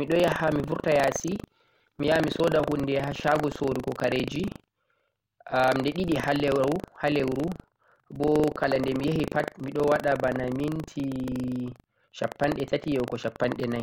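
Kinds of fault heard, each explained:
Buffer tearing: the program writing the ring buffer and the hardware reading it have slipped, so each period a small slice, under a tenth, replays audio about 70 ms old with hard joins. The result is a steady robotic 25 Hz buzz riding on the speech throughout.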